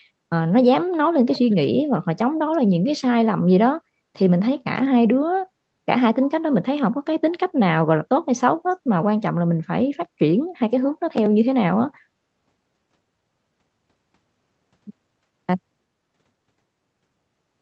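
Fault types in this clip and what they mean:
Echo leak: From 1.31 to 1.69 s a faint, delayed copy of the speech trails the original by about 360 ms, sitting well below the main voice, like a brief ghost of what was just said. The likely cause is a loudspeaker on the far end whose echo canceller failed to fully suppress what its microphone picked up, so a residue of the returning voice was sent back.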